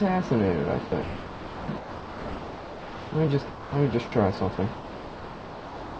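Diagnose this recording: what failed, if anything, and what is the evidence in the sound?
Call processing stage: sound gives way to steady comfort noise at 0.86–0.92, 1.02–1.68, 1.78–3.12, 3.50–3.72, 4.08–4.12, 4.56–4.58 and 4.74–5.99 s. This is likely sound dropped by the voice detector.

Driver or buffer stage: a repeated buffer gives a brief click at 3.28 s. A tiny piece plays twice, which fits a 64-sample buffer arriving late.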